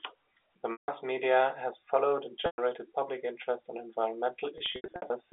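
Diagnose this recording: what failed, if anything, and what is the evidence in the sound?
Network packet loss with pitch repetition: the receiver loops the last pitch period over gaps at 0.72–0.88 s, 2.46–2.58 s and, scattered, 4.58–5.1 s, fading it out over about 50 ms so the longer gaps fall into silence before speech returns with a short cross-fade.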